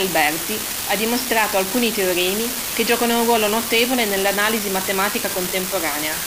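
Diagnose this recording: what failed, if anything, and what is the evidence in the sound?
An unreliable data bit in the converter's digital path: one marginal line flips randomly, adding equal spikes of about -12 dBFS throughout, crackling even in pauses, unlike signal-dependent clipping.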